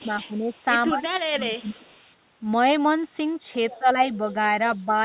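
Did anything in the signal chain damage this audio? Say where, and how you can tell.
Yes. The damage happens in the call processing stage, at the echo canceller. There is speech suppressed in double talk at 0.0 to 0.52 s, 0.89 to 1.85 s, 3.79 to 3.95 s and 4.78 to 4.93 s. The speech dips in level each time. The deepest dip is about 20 dB, in the second stretch. The others reach about 10, 15 and 5 dB. The likely cause is the far side talking at the same time. The canceller cannot tell local speech from loudspeaker echo, so it attenuates everything.

There is also an echo leak, again at the echo canceller, at 0.54 to 0.61 s and 1.83 to 2.13 s. A faint copy of the speech trails it by 196 ms. It sits about 40 dB and then about 35 dB below the direct sound. It likely comes from a loudspeaker whose sound reaches a microphone, with the canceller leaving some residue. That residue returns to the listener one round-trip later.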